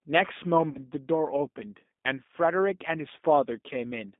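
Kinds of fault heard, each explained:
G.729 codec: An 8 kbit/s speech coder that rebuilds the signal from a vocal tract filter, pitch predictor and sparse pulses, giving a plainly rough, synthetic edge here. A spectrogram shows energy confined to roughly 200 Hz to 3.6 kHz, empty above.
VoIP packet loss concealed by the speech codec: From 0.69 to 0.81 s, about 60 ms of audio went missing, which fits two lost packets. The decoder extended its last pitch and filter, producing a stretched, fading sound that shows as a dipping waveform envelope.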